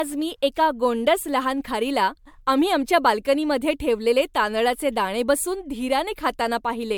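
Speech carrying generation loss from start to finish: the sound is swirly, smeared and hollow, with blurred attacks and nothing above 20.1 kHz. This likely comes from around five passes through MP3, each requantising on a shifted frame grid, at settings consistent with 128 kbit/s.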